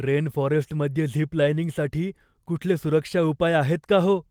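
No technical faults can be heard anywhere in the speech. There is nothing in it that needs a timestamp or further comment.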